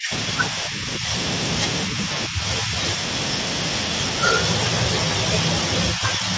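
Speech dips four times: 0 to 0.27 s, 0.5 to 1.13 s, 1.86 to 2.74 s and 5.94 to 6.31 s. The first dip is deep, about 30 dB. The rest are shallower, about 5 to 10 dB. This is likely speech suppressed in double talk. The echo canceller turned the talker down while the far side spoke.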